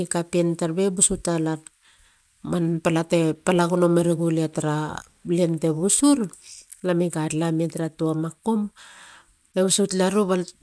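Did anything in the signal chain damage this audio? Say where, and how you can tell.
Yes. Throughout, sibilants sound gritty and metallic: aliasing from sample-rate conversion without filtering, which fits a drop to 22 kHz. Content above 11 kHz folds back, roughly 25 dB down.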